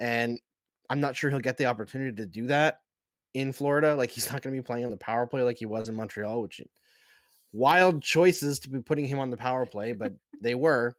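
It's a speech clip with short concealed packet loss at 0.33–0.37 s, just before "I'm not sure he'll", at 4.87–4.91 s, between "to be playing on" and "the power play like", and at 5.81–5.86 s. Roughly 20, 20 and 40 ms of audio never arrived, and the receiver stretched the preceding sound to fill each hole, so you get a quick smear or wobble. There's also a lost packet rebuilt from error correction at 0.35, 4.89, 5.84 and 8.34 s, the last just before "to be putting him". Each is a single 20 ms packet that the decoder recovered from the low-bitrate copy carried in the next packet. So there's no gap, just a rougher, noisier frame.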